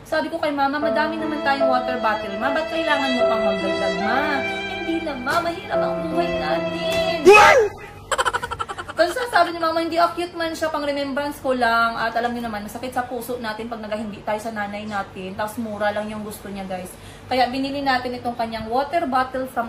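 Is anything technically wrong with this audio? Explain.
No, nothing technically wrong can be heard in this audio; the signal holds steady throughout with no audible faults.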